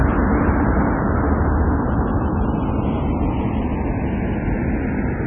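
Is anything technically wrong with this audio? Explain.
Yes, two faults run through the whole clip.

Channels drifting apart: the left and right channels were captured on separate clocks that disagree by something like 70 parts per million, so the delay between them keeps growing, reaching roughly half a millisecond by the end. When the channels are summed, the comb-filter notches created by that tiny offset slide steadily through the spectrum, giving the sound a slow, sweeping flanger-like whoosh from start to finish.

MP3 compression is the likely cause of the second fault. An encoder starved of bits has removed everything above 3.4 kHz and discarded weaker frequency components, which blink in and out from frame to frame. The damage is heavy, consistent with an extremely low bitrate of around 16 kbps. The result is dull, muffled audio with a watery, swirling texture, metallic chirps on bright detail, and attacks smeared instead of crisp.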